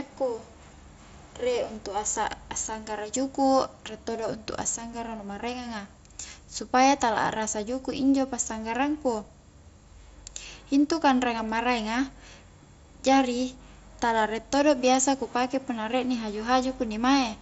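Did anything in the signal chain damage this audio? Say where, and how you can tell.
No, nothing stood out on listening that points to damage at any stage of the signal chain.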